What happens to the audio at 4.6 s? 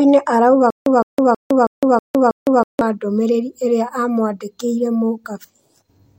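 Nothing goes wrong at 4.6 s: the speech plays through that moment intact, with no dropout, click or other fault.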